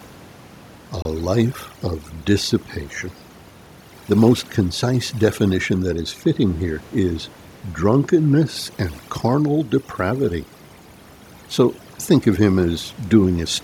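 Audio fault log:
throughout, overdone noise removal: the speech has its quieter edges and soft consonants hollowed out, and the gaps between phrases fall to a near-silent floor dotted with twinkling specks. A noise reduction stage has been pushed too hard. The room noise sits only about 29 dB below the speech, and the processing cuts individual frequency bands whenever they dip toward its noise estimate, taking the weaker parts of the speech down with the background.
1.02–1.05 s, Bluetooth stall: the audio drops abruptly to silence for about 28 ms, then resumes cleanly just before "life of dissipation". The sound does not fade or smear. It simply stops and restarts, which is typical of a wireless playback gap. The likely cause is radio interference delaying packets on the link, so the headphones' buffer emptied and output paused until the delayed audio arrived and playback could continue.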